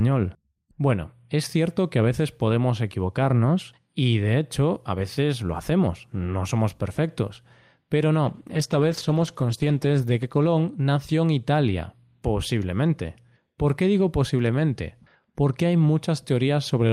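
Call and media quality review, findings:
Call bitrate drop, 8.24–11.53 s: encoder pushed from 48 to 15 kbps, bottoming out for 1.45 s. Coarser coding, high end cut off; speech turns muffled, rough.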